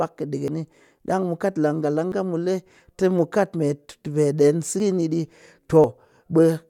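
Speech with four small skips at 0.48 s, 2.12 s (just before "mu le"), 4.8 s and 5.84 s, each a point where the sound jumps ahead with no gap. It's likely a dropped buffer (overrun), losing around 40 ms each time and nearer 70 ms at the last one.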